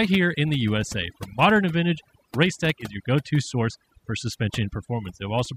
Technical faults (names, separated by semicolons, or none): overdone noise removal